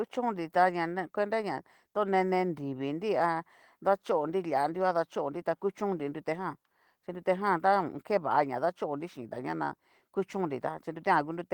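No technical faults can be heard in this speech clip. The Opus voice compression is working as intended in its hybrid mode, keeping the full band with content reaching about 20.2 kHz and leaving only light coding traces, which fits a rate of around 20 kbps.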